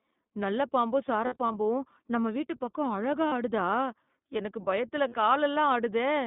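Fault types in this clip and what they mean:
iLBC codec: A narrowband VoIP codec that codes each frame independently. The speech is squeezed into roughly 150 Hz to 3.7 kHz and carries a plainly audible rough, slightly synthetic edge, which fits the 15.2 kbps mode with 20 ms frames.
Lost iLBC frames: Dropped packets that the decoder covers by repeating the last pitch cycle with some noise mixed in, so the gaps come out as short buzzy held vowels. The worst stretch is around 1.26 to 1.56 s, where 160 ms of audio is missing across about 280 ms in runs of under a tenth of a second. Shorter gaps of 40 ms at 3.28 s and 60 ms at 5.08 s follow, each recovering almost at once.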